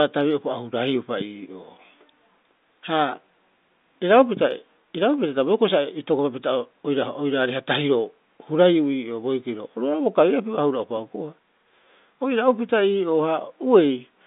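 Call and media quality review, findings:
Nothing to flag on this one: the speech sits in the usual G.711 telephone band of about 200 Hz to 3.7 kHz, and no faults turn up anywhere in it.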